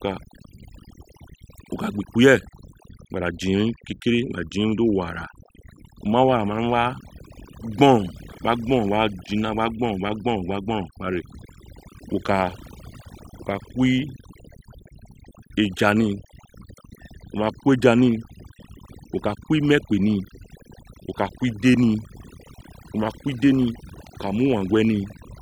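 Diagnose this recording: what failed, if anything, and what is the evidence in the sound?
The background drops between phrases throughout, leaving twinkling specks. This is overdone noise removal at the processing stage: a noise suppressor set too strong shuts off individual frequency bands near its noise estimate, taking quiet voice detail with them.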